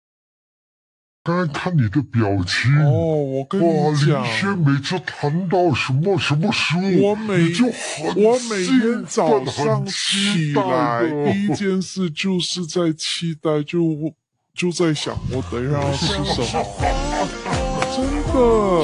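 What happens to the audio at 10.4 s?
At 10.4 s the sound is slowed and lowered together, running at about two-thirds of its proper speed and sitting roughly 7 semitones (close to a fifth) below where it belongs. That moment isn't special, since the drag and deepening persist across the whole clip. The cause is a wrong sample rate. The samples are being played back more slowly than they were captured, with no conversion, which fits 48 kHz material played at 32 kHz.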